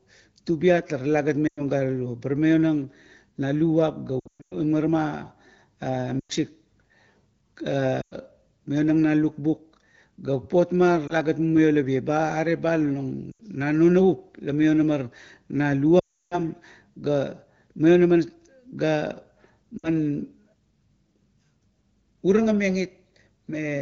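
Lost AMR speech frames break into the speech eight times. Brief dropouts of 60 to 100 ms fall at 1.47, 6.20, 8.01, 13.31 and 19.78 s, and a single-frame dip comes at 11.07 s. Longer damage hits 4.20 to 4.55 s, in scattered gaps with a longest run of 120 ms, and 16.0 to 16.4 s. The decoder repeats the last good frame with falling gain. Each multi-frame run drops to near silence within two frames in this wideband stream. Speech returns briefly weak.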